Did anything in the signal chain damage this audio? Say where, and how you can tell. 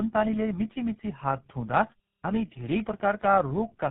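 Yes. Codec stage: tandem speech coding throughout. iLBC then GSM full rate twice each recode the last coder's errors, leaving rough, warbly speech with nothing above 3.8 kHz.

Playback stage: clipped start after a pause at 2.2 s. The output device, idle for 0.34 s, wakes late and swallows the first 40 ms.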